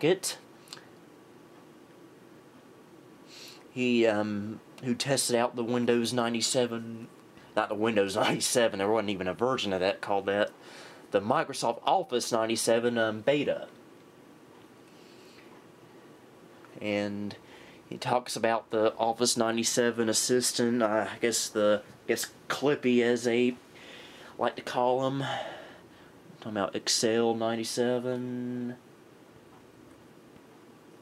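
No technical faults can be heard anywhere in the audio.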